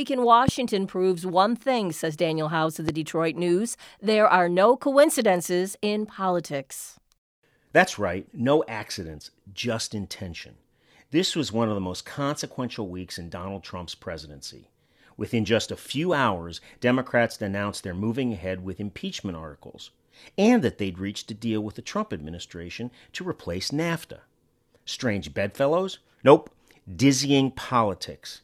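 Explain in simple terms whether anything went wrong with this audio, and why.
Something in the playback or recording chain most likely sent a sudden jolt of electricity into the signal, the kind that comes from a plug, a switch or a brief glitch in the equipment. Each jolt is heard as a loud pop, a single sharp crack much louder than the speech, while the talking carries on underneath. The first comes at 0.48 to 0.51 s, just before "proves one thing says", and the second at 2.89 to 2.91 s, right after "of the".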